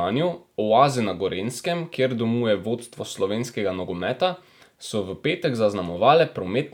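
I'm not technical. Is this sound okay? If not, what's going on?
Yes, nothing in this recording stood out as a problem on listening.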